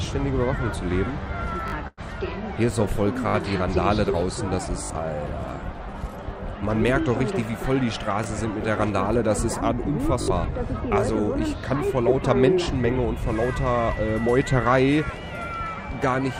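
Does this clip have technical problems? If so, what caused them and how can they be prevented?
Yes. Repeated buffer faults occur at 1.68–1.72, 3.28–3.34, 4.84–4.90, 8.24–8.26, 10.22–10.28 and 12.64–12.66 s. Each is a short piece played one to three extra times with a hard join, a length that fits a 20 ms buffer, and a few tens of milliseconds of real audio are lost. Unlike a freeze, the repeats are identical copies rather than a fading tail. Larger output buffers or a higher-priority audio thread would prevent it.

A call audio freeze runs from 1.87 to 2.01 s. The last sound stretches for about 0.1 s, including roughly 30 ms of silence, and then resumes where it stopped with nothing missing. That points to a jitter buffer likely running empty after delayed packets. It differs from a repeated buffer because the sound decays instead of stuttering. A steadier network path or a deeper jitter buffer would prevent it.

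A jitter buffer speed-up runs from 8.44 to 9.14 s. Playback is about 4% fast at unchanged pitch, and around 40 ms are trimmed in tiny pitch-period cuts. Because the pitch stays put, it is distinct from a sample-rate error. Gentler delay reduction or a more stable network would prevent it.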